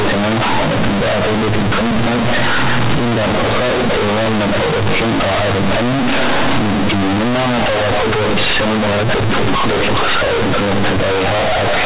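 From start to finish the speech suffers from companded audio read as linear. The mu-law bytes are treated as plain 8-bit samples and never expanded, so every sign change throws the output across roughly half its range. Quiet passages come out as loud as peaks and the waveform is badly bent, giving a harsh, buzzy, very loud distortion with heavy noise filling the pauses. The underlying G.711 telephone coding itself, mu-law at 8 kHz, is working as intended.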